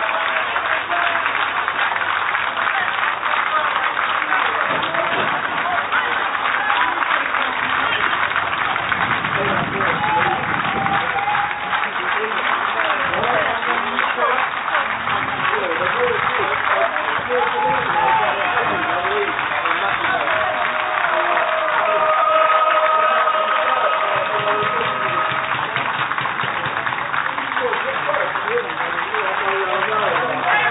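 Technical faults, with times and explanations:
Nothing technical stands out here; the recording runs along without any glitches or dropouts worth pointing to.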